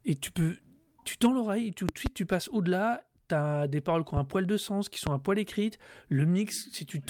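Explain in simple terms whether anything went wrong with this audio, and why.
Loud pops jump out over the speech: a double pop at 1.89–2.09 s, then single pops at 4.17–4.20 s and 5.07–5.09 s, likely from sudden electrical jolts.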